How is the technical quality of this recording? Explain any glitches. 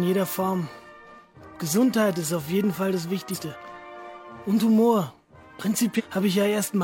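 The recording has two skips from compressed frames being dropped. At 3.30 s and 5.95 s, the audio jumps ahead. The first skip loses about 100 ms, which points to two 46.4 ms frames. The second loses about 400 ms. Each join is heard as a sudden jump forward in the audio.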